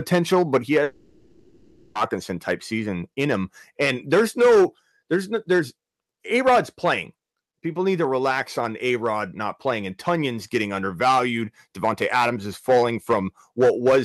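From the first word to the last, the speech shows hard clipping. The level is driven about 8 dB beyond what a stage in the chain can pass, so a few percent of the samples have their peaks sliced flat. Those squared-off tops generate harmonics high in the spectrum, which roughen the loud peaks.

At 0.83 s, right after "but he", the audio stops arriving for 1.12 s. This is most likely a long network dropout. The receiver papers over the entire gap by extending the last sound into a fading buzz and hiss, with no stretch of true silence. Real speech resumes at 1.97 s with "type season in him", and whatever was said in between is simply gone.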